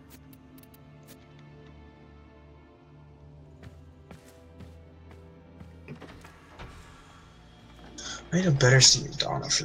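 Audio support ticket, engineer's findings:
No faults found in clip.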